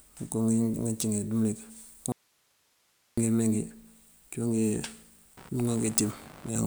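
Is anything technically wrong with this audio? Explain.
Yes, there are two faults.

An audio dropout to a faint residue runs from 2.12 to 3.18 s. For about 1.05 s the speech is abruptly lost and only hiss remains, roughly 40 dB down. The cause is likely a break in the signal feed while the downstream path stayed live.

Computer activity noise starts at 5.37 s and lasts to the end. Processor or graphics load shifting the shared ground produces a buzzing pulse at around 70 per second, about 25 dB below the speech, following machine activity rather than the sound itself.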